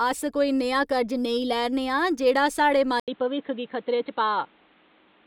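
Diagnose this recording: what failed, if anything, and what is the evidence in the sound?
At the device/driver stage, the input was likely switched to a poorer device: after "जेह्ड़ा साढ़े", at 3.00 s, an 80 ms gap precedes speech cut off above 4.2 kHz with new faint background noise. The gap and changed noise floor rule out a codec bandwidth drop.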